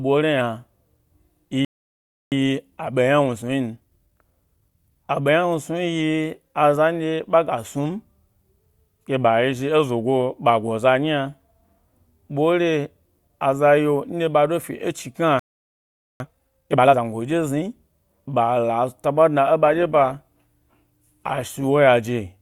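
At 1.65 s the speech cuts to silence for 0.67 s, a playback stall, likely the player running short of buffered data. From 2.32 to 5.32 s the speech runs hurried at normal pitch, about 1.1 times speed. This is time-compressed catch-up, as the player trims small cross-faded pieces to clear its backlog.

At 15.39 s another 0.81 s silence interrupts the speech, again likely a playback stall. From 16.20 to 17.00 s the catch-up is far harsher, at double speed, so the speech rushes audibly.

From 19.65 to 21.65 s the sound turns suddenly more smeared, with no gap. That points to an adaptive stream switching to a lower bitrate, consistent with Opus dropping from 64 to 24 kbit/s.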